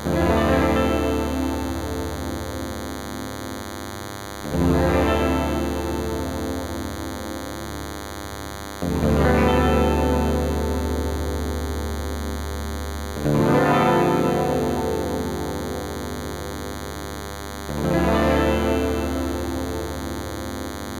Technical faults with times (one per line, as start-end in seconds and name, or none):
0.00-21.00 DECT cordless phone buzz